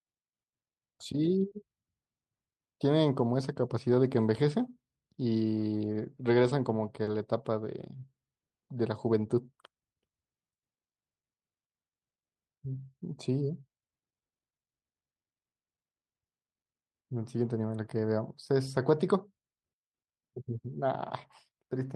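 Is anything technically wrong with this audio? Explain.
Yes. The speech has two instances of short concealed packet loss, at 1.49 to 1.53 s and 7.03 to 7.09 s, where about 20 ms and 40 ms of audio failed to arrive in time. The receiver extended the preceding sound to fill each gap, then crossfaded back into the real signal, leaving a brief smear or wobble. This all passes through a call codec whose audio band stops around 12 kHz.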